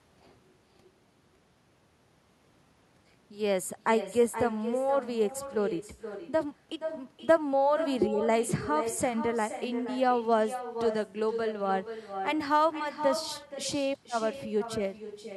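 Throughout the speech, every phrase is trailed about half a second later by a quieter, thinner copy, about 10 dB down. This is echo with no canceller: the far end's loudspeaker feeds its microphone, and nothing removes the returning signal after the network round trip.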